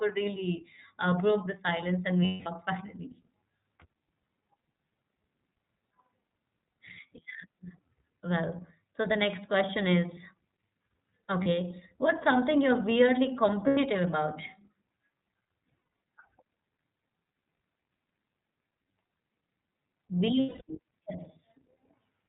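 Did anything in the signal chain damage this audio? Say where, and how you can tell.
Yes. The codec stage is the first culprit: the whole clip has passed through the iLBC codec, a narrowband VoIP coder, and the damage is plainly audible. Nothing above 4 kHz survives, so the speech is dull and boxy. Each 30 ms frame's excitation is coded on its own, which leaves a slightly rough, synthetic edge on every sentence. That frame length and grain fit iLBC's 13.33 kbps mode.

The network stage adds lost iLBC frames at 2.25 to 2.47 s (210 ms), 11.42 to 11.47 s (30 ms), 13.68 to 13.78 s (90 ms), 15.68 to 15.92 s (150 ms of gaps scattered over 240 ms, the longest run around a tenth of a second), and 20.40 to 20.62 s (210 ms). In each gap the decoder repeats the last pitch cycle mixed with noise, heard as a held, buzzy or breathy vowel that fades in the longest gaps. Because iLBC frames are independent, the speech snaps back almost at once.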